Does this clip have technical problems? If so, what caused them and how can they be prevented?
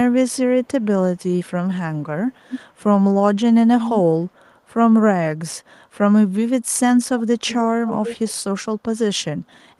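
Yes. From 1.18 to 1.23 s a brief, delayed copy of the speech comes back, trailing the original by about 264 ms and sitting roughly 40 dB below it. This is an echo leak, likely caused by a loudspeaker at one end of the call whose echo canceller failed to fully remove what its microphone picked up, so a scrap of that played voice was sent back. Using headphones at that end, or a better-tuned echo canceller, would prevent it.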